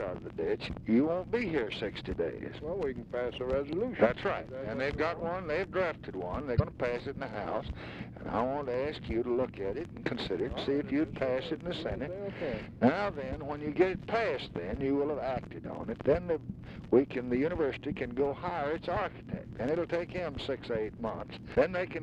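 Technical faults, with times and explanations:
6.55–6.60 s and 21.51–21.56 s, damaged data in a compressed stream: at both points a stretch of the encoded bitstream has been corrupted, so the decoder cannot read the affected frames correctly, loses its place and has to hunt for the next valid frame header before normal decoding resumes. Each event is heard as a brief chirp, squawk, click or short hole, about 58 ms at the first point and 48 ms at the second, cutting across the audio.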